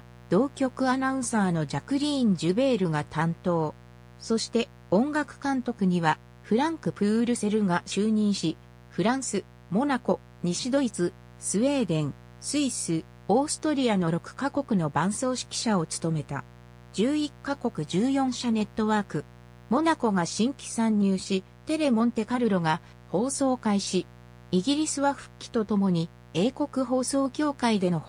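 A mains buzz runs from the very start to the end, a steady, raspy rasp sitting about 25 dB below the wanted sound. Sharp switching spikes from a dimmer, rectifier or poorly shielded line get in twice per 60 Hz cycle, so the interference lands on harmonics of 60 Hz and carries them far up into the kilohertz range. On a spectrogram this shows as a comb of unbroken horizontal lines stacked up the frequency axis. The waveform carries a regular train of small spikes repeating every 8.3 ms.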